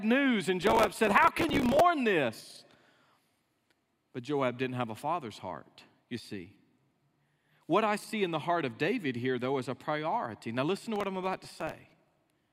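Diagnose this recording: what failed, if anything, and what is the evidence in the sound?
Processor overload crackle at the driver/buffer stage, 0.62–1.80 s and 10.96–12.22 s: dozens of missed few-millisecond buffers replay stale audio with hard edges. The gritty tearing, unlike distortion, stops once the load passes.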